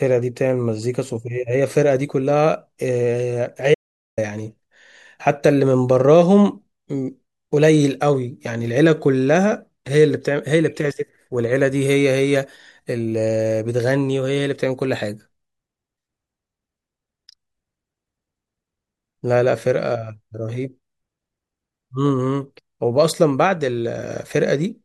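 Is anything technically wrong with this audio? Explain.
Yes. From 3.74 to 4.18 s the speech cuts out to dead silence, with no room tone, for 0.43 s. This audio dropout to silence likely came from lost input while zeros were still written.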